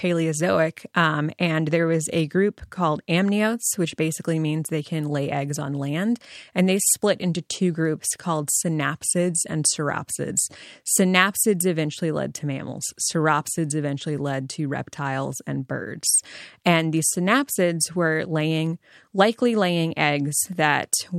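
No technical faults can be heard anywhere in the signal.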